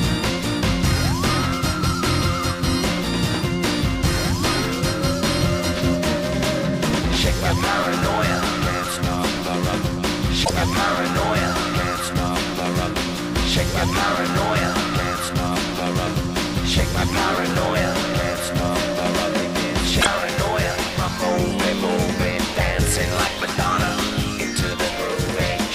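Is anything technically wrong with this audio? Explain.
Yes, there are a couple of problems. At 6.90 s there's a repeated buffer: new audio arrived late, so a tiny chunk, about 1.45 ms and consistent with a 64-sample buffer, played three extra times, giving a quick click-buzz without losing anything. Then there's damaged data in a compressed stream at 10.41–10.51 s and 19.97–20.07 s: corrupted frames made the decoder lose sync and hunt for the next header, producing a roughly 0.1 s glitch each time.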